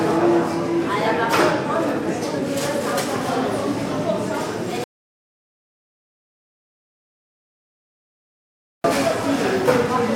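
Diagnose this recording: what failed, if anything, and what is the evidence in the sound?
An audio dropout to silence runs from 4.84 s to 8.84 s. The sound cuts off abruptly and resumes just as suddenly, leaving about 4.0 s of digital silence. No room tone or noise floor survives in the gap, so the recording chain kept writing silence while receiving nothing. The failure is likely at the input stage, such as a disconnected device, a broken link or an accidental mute. Whatever occurred during those four seconds is lost.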